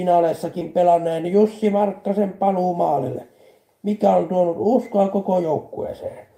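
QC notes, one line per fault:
0.59–0.63 s, short concealed packet loss: about 20 ms of audio arrived too late for the decoder, and the receiver filled the gap with roughly 13 ms of sound extrapolated from what came before, then crossfaded back, leaving a brief smear.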